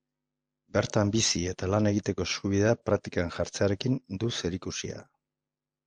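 Nothing stood out on listening to this speech recording.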